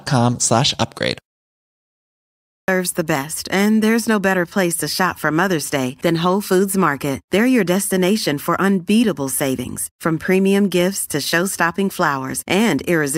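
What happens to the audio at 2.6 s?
At 2.6 s the sound falls inside a clipped start after a pause, running from 2.13 to 2.68 s. After about 0.94 s of silence the output device had gone idle and needed time to wake, so the first 0.55 s of the returning speech is swallowed and it bursts in abruptly, missing its onset. On a waveform, flat silence jumps straight into speech at 2.68 s with no rise, and a spectrogram shows a hard vertical edge instead of a gradual onset.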